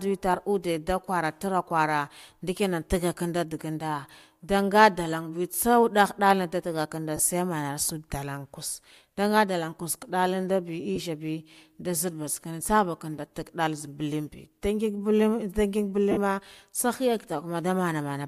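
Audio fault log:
7.17–7.19 s, 10.96–10.98 s, 16.11–16.18 s: lost LE Audio frames. Gaps of 22.5, 15 and 52.5 ms, likely dropped 7.5 ms LC3 frames, are concealed by repeating the last spectrum with random signs, turning speech into a brief noisy smear that fades in the longest one.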